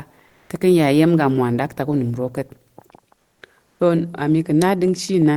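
Speech with comfort noise in place of the background three times: 0.31–0.49 s before "te ka̱ ya", and 3.19–3.37 s and 3.67–3.79 s, each before "to a". The pauses turn to steady, featureless hiss about 3 dB louder, then about 5 and 4 dB quieter, likely from Opus discontinuous transmission. On a spectrogram these show as smooth, uniform noise blocks with abrupt level steps.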